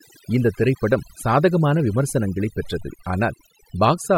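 Throughout the recording the background drops to near silence flecked with twinkling specks. This is overdone noise removal: a noise reducer set too hard pulls individual frequency bands down whenever they sit near its noise estimate, taking quieter parts of the speech with them.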